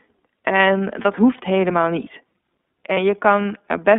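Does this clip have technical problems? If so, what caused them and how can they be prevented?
Yes. The whole recording carries iLBC codec damage, which is plainly audible. The speech is confined to roughly 200 Hz to 3.5 kHz, with nothing above that, and it has a slightly rough, synthetic edge. This fits iLBC's 13.33 kbps mode with 30 ms frames, where each frame's excitation is coded independently. Unlike wideband codecs or simple low-pass filtering, the band is narrow and the texture is also rough and synthetic. To prevent it, negotiate a wideband codec such as Opus or G.722 when both ends support one.

There are lost iLBC frames at 1.01 to 1.06 s, just before "hoeft helemaal niet", and again at 2.94 to 2.98 s. At each point about 30 ms of audio, consistent with a single lost packet, is replaced by the decoder repeating the last pitch cycle mixed with noise, which sounds like a brief held, slightly breathy vowel. 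Unlike a dropout to silence or a click, the gap is filled, and the speech recovers cleanly right after because iLBC frames don't depend on earlier ones. To prevent it, reduce packet loss on the network path, for example with QoS prioritisation or forward error correction.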